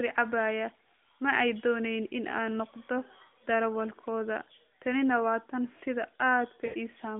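Speech, heard through a narrowband phone channel limited to roughly 200 Hz to 3.5 kHz, briefly stretches into a smeared hold and sinks away between 6.66 and 6.75 s before the voice returns thin and rough. That is lost AMR speech frames: radio bit errors failed the frames' checks, so the decoder kept replaying its last good pitch and vocal tract settings at falling gain. The 80 ms gap fits four 20 ms frames.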